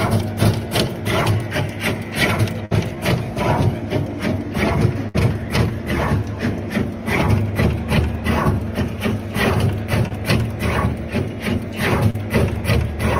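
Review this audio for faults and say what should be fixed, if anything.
Two bursts of packet loss, at 2.65 to 2.73 s and 5.08 to 5.16 s, each drop about 60 ms of audio. The receiver stretches the last sound for 54 and 59 ms while fading it, then jumps ahead. A spectrogram shows smeared, decaying bands ending in an abrupt seam.

Short concealed packet loss at 10.08 s and 12.10 to 12.16 s loses 20 and 40 ms. Brief synthesized fill bridges each hole, heard as a quick smear or wobble. A waveform shows a slightly repetitive stretch joined by a crossfade.

Fixing this requires a more robust network path, a larger jitter buffer, and forward error correction so lost packets can be recovered rather than concealed.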